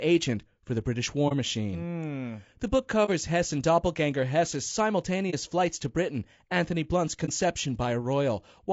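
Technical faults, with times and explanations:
Throughout: low-delay AAC compression, likely AAC-ELD at about 32 kbps; speech sounds rough and grainy, with noise filling the spectrogram between harmonics and a blurred upper band.
1.28–1.33, 3.05–3.09, 5.30–5.34 (just before "flights to") and 7.25–7.29 s: AAC frame loss with muting. Each lost frame leaves a soft-edged gap that fades out and back in, seen as a tapered waveform dip and a vertical spectrogram blank.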